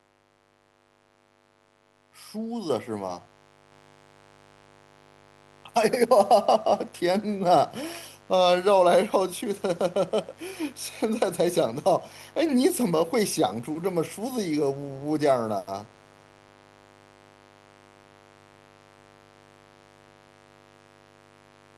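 A mains buzz runs through the whole recording, a steady raspy drone sitting roughly 25 dB below the speech. Sharp switching spikes at twice the 50 Hz mains rate put a comb of harmonics on 50 Hz spacing reaching well into the kilohertz range, drawn on a spectrogram as unbroken horizontal lines.

At 2.7 s the microphone volume stepped up by 6 dB in a single jump, with the software raising the input gain because it judged the level too low. Speech and background noise both get louder at once, and the waveform envelope widens abruptly at that instant.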